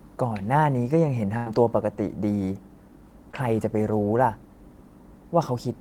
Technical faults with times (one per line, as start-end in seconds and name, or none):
1.37-1.48 burst of packet loss
3.32-3.35 short concealed packet loss